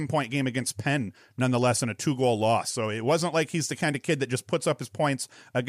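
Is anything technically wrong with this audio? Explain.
No, nothing technically wrong can be heard in this speech recording; the signal holds steady and intact throughout.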